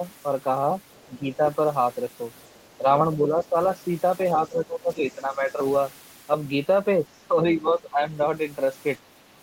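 At 0.91 to 1.03 s, the other side's voice leaks through. It is faint, far below the talker. The likely cause is loudspeaker echo the canceller failed to remove. From 1.05 to 1.4 s, speech is suppressed in double talk. The talker dips by about 10 dB. Both voices overlapped, and the canceller likely turned everything down. The leak returns from 2.36 to 2.76 s, again faint. Further suppression follows at 3.16 to 3.56 s, 4.35 to 5.6 s, and 7.6 to 8.12 s, each about 10 dB. The deepest drop, about 15 dB, falls at 7.1 to 7.34 s.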